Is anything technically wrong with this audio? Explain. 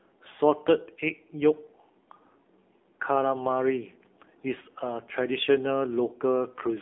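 Yes. Throughout, the speech carries AMR narrowband mobile codec damage. The audio sits in a telephone band of roughly 250 Hz to 3.5 kHz, with nothing above 3.8 kHz. The codec rebuilds the voice from a vocal-tract model excited by sparse pulses, and at the plainly audible damage here, which points to a low AMR-NB mode near 7.4 kbps, voices turn buzzy and synthetic. A plain band-limited phone line would sound narrow but clean rather than artificial.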